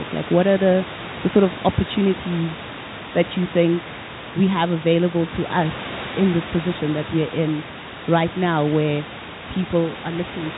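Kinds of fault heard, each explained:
No kinds of fault are heard in this speech clip.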